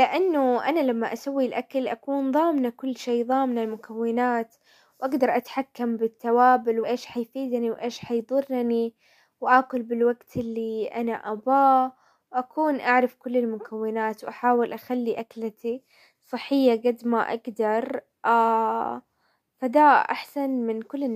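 Compressed frames skipped at 5.18 s and 6.83–6.85 s: a couple of frames drop out each time, jumping ahead by about 5 ms and 50 ms.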